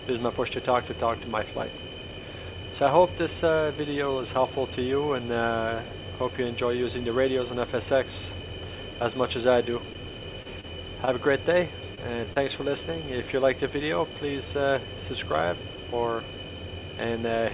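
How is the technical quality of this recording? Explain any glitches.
The audio has the narrow, band-limited sound of a call path. Nothing is heard above 4 kHz, which fits G.711 mu-law telephone coding. Several network glitches cluster between 9.9 and 12.5 seconds.

Short stalls from late packets occur at 9.93 to 9.97 s and 11.05 to 11.09 s. A packet arrived late and the jitter buffer ran dry. The receiver held the last sound for about 16 to 19 ms. Nothing is lost. The sound just drags briefly, with a faint buzz or dip.

Short concealed packet loss occurs at 10.43 to 10.47 s and 10.61 to 10.65 s. Each time, about 20 ms of audio never arrived. The receiver extended the preceding sound to cover the hole, then blended back. It is heard as a quick smear or wobble.

Repeated packet loss, with a robotic sound, runs from 11.95 to 12.48 s. Four gaps fall in this half second, the longest about 22 ms. 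Each was patched by continuing the last sound, covering about 11% of the stretch. The result is choppy, with pieces missing.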